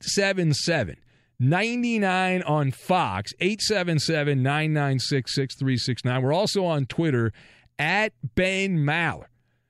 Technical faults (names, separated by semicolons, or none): none